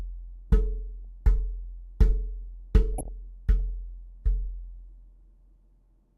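At 1.01 s, for about 0.1 s, DAB burbling breaks in. Bit errors slipped past error correction into the MP2 data, so wrong samples put short blips of noise in individual sub-bands, giving a few watery blips over the sound. It returns at 2.98 s for about 0.1 s, denser, pointing to more frames hit and a higher error rate. Unlike a packet-loss dropout, the burbling does not cut the audio to silence. It warbles in isolated frequency bands instead.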